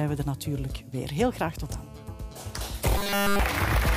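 At 1.63 s a GSM phone buzz cuts in and holds until 2.59 s. A 2G handset somewhere close was in a call, pulsing its transmitter about 217 times a second, and the audio circuitry rectified those radio bursts into sound. You get a hard, raspy 217 Hz buzz packed with harmonics, sitting about 23 dB under the signal and staying nearly steady, with no relation to what the audio itself is doing.

Then from 2.98 s to 3.40 s the sound goes robotic, taking on a stiff, metallic 200 Hz buzz while still loosely tracking the shape of the original. The likely cause is repeated short buffers: new audio wasn't arriving fast enough, so the playback kept replaying the last tiny chunk, essentially all of that stretch, instead of moving on. A 200 Hz pitch fits a chunk about 5 ms long looping over and over.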